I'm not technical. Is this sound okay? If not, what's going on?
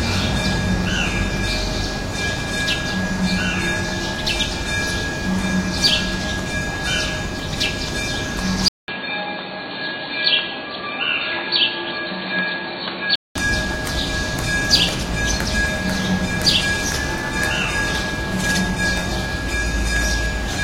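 No. From 8.68 to 13.35 seconds the sound turns dull and boxy, as if heard through a phone, and slightly quieter, with faint new background noise. It begins with a brief gap of about 0.2 seconds. The likely cause is an input switched to a poorer device, such as a headset's call mode that cuts everything above 4.4 kHz. Unlike a simple muffling effect, the tone, loudness and background noise all change together, and everything clears up again at 13.35 seconds.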